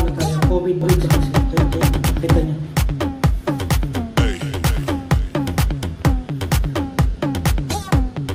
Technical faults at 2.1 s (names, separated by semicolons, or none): doubled audio track